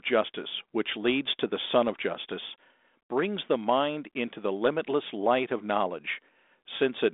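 No technical faults are present.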